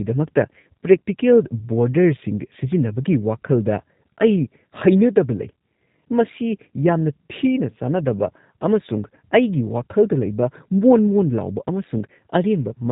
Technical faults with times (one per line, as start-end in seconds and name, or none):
0.00-12.91 G.729 codec
0.60-0.64 VoIP packet loss concealed by the speech codec